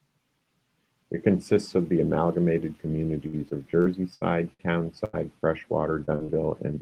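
From 3.27 to 4.61 s, repeated packet loss (robotic sound) leaves six gaps, the longest 78 ms, patched by continuing earlier audio; about a fifth of the stretch is fill, giving choppy speech with pieces missing. Unlike a single burst, the holes keep coming.

At 5.05 to 5.15 s, a burst of packet loss drops about 80 ms at once. The last sound is held and faded, then speech resumes further on, as one isolated gap rather than a run.

Short concealed packet loss follows at 6.05 to 6.10 s, 6.16 to 6.37 s and 6.26 to 6.30 s. Each is only 20 to 40 ms, heard as brief smears or wobbles instead of an obvious dropout.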